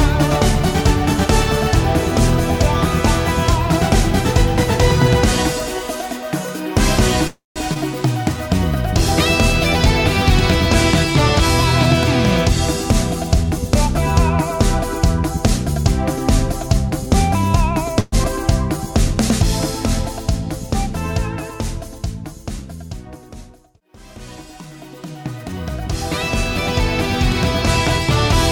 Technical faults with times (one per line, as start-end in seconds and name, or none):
7.27-7.58 call audio freeze
7.74-7.77 skip ahead
8.24-9.88 jitter buffer slow-down
12.84-17.30 jitter buffer speed-up
18.00-18.14 call audio freeze
18.24-18.26 skip ahead
18.37-19.16 jitter buffer slow-down
23.05-25.53 jitter buffer speed-up